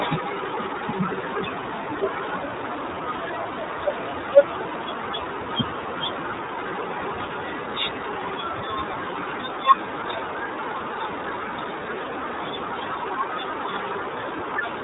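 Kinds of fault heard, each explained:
iLBC codec: This speech runs through iLBC, a narrowband voice codec that codes each 30 ms frame on its own, and the damage is plainly audible. Nothing above 3.8 kHz survives. The speech sounds muffled, slightly rough and synthetic, which fits a rate of about 13 kbps.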